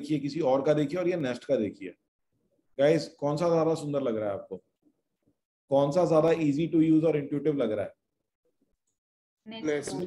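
At 1.2 s there is a single sharp click. A second click follows at 6.28 s. Each is likely caused by dropped samples, where a tiny stretch of the stream, a fraction of a millisecond, goes missing. The waveform then jumps straight from one value to a later one. That sudden step produces the click. No sound is audibly lost. In a spectrogram each click shows as a thin vertical line.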